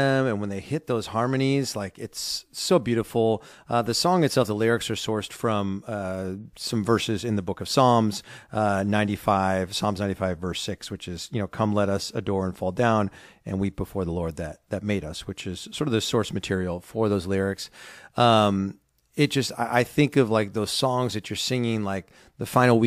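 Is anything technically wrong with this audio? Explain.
No, nothing in this speech recording points to a technical problem with the signal.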